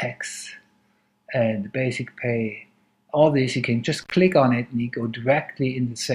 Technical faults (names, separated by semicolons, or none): intermittent contact